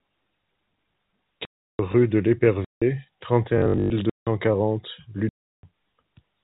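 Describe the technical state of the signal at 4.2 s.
At 4.2 s the signal sits inside a block of digital silence running from 4.10 to 4.27 s, about 170 ms long, a span that fits an 8192-sample block. A whole block of the speech was replaced by zeros, with no fade in or out. The audio therefore drops abruptly to dead silence and returns just as sharply, leaving an audible hole in the speech. The G.711 telephone band is simply absent during the gap.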